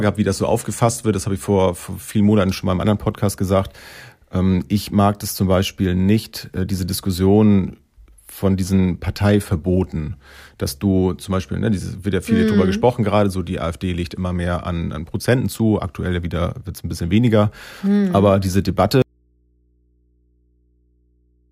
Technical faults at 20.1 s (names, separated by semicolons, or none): audio dropout to a faint residue